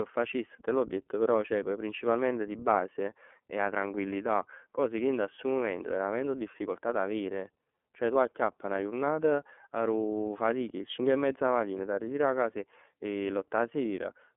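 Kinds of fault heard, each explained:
iLBC codec, throughout: each 30 ms frame of speech is coded on its own, without leaning on the frame before. This leaves a plainly rough, synthetic texture that fits the 13.33 kbps mode, and the band is confined to roughly 250 Hz to 3.4 kHz.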